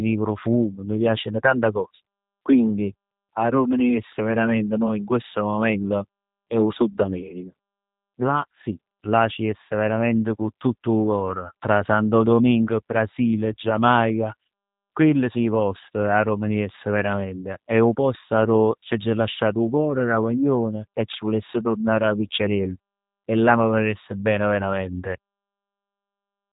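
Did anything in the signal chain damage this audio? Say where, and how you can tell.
Yes, at the codec: throughout, the speech stops at 4 kHz and sounds rough and synthetic, which fits the G.729 codec rebuilding it from filter and pulse parameters at 8 kbit/s.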